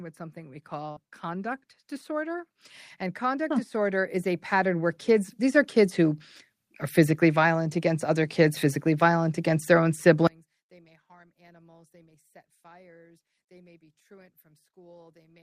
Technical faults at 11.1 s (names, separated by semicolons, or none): one channel inverted